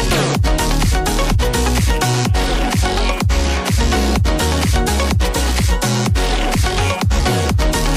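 At 7.20 s there is a CD skip. The laser loses its track and lands on another turn of the disc's spiral. The player mutes for only a few milliseconds. A tick is heard, and the sound jumps abruptly to a different point.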